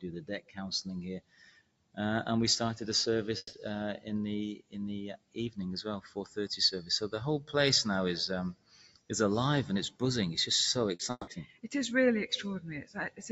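A speech-tuned noise suppressor was left running on this non-speech audio, and it keeps mistaking steady, sustained content for background noise. As a result the level swings by roughly 10 dB throughout: attacks get through at close to full strength, while held sounds and decaying tails are pulled down, so the sound pumps and thins out rather than sustaining naturally. All of this sits within a band that stops at 8 kHz, as the call path delivers it.

At several points the suppressor cuts a passage much harder than the surrounding audio: 0.41 to 0.57 s, 1.21 to 1.97 s, 4.56 to 4.75 s, 5.17 to 5.37 s, 6.05 to 6.37 s, 8.54 to 9.1 s, 11.45 to 11.68 s and 12.85 to 13.2 s. The deepest of these drops reach about 13 to 18 dB. The longest, near 1.2 to 2.0 s and 8.5 to 9.1 s, sound like the sustained part sagging away while the onset survives, with decays ending early.

Two gaps of about 0.18 s, at 3.37 to 3.55 s and 11.11 to 11.29 s, are likely network dropouts, where a stretch of audio never arrived. 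In each, the receiver extends the last sound for around 160 ms as a fading buzz or hiss, then there are 20 to 30 ms of near silence. When the audio resumes it is further along, and the missing part is simply gone.

Just before the second gap, at 10.95 to 11.01 s, a short concealed packet loss drops 40 ms of audio. The decoder bridges the hole by continuing the preceding sound and blending back into the real signal, which comes through as a brief smear or wobble.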